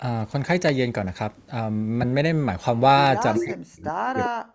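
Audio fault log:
0.69–0.71 s and 3.07–3.09 s, loud pop: A sudden voltage step or pulse, likely from a plug, switch, static discharge or driver glitch, entered the signal path, and the circuits after it shaped it into a brief burst. Each is heard as a single sharp pop laid over the speech, which carries on underneath. The first stands out more, peaking at about 15 dB above the surrounding signal, against about 10 dB for the second.
3.38–4.54 s, speech suppressed in double talk: Both ends were likely talking at once, and the echo canceller could not tell its own talker apart from loudspeaker echo, so it turned the outgoing signal down. The speech dips and drops out in pieces over about a second in all, sinking at its deepest by about 40 dB, so parts of the talker's speech nearly vanish while the other side speaks.
4.24–4.29 s, echo leak: On the loudspeaker side of the call, the echo canceller likely failed to remove everything its microphone picked up, so part of the played-back speech was sent back into the call. 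A short scrap of delayed copy, arriving 392 ms behind the original and sitting about 10 dB below the speech, surfaces briefly inside the suppressed stretch, in the band-limited call audio that stops at 8 kHz.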